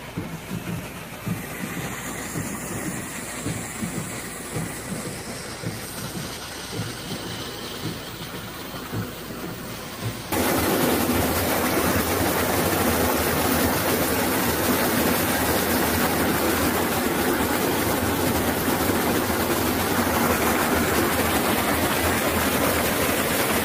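Nothing stood out as a technical fault on listening to this recording.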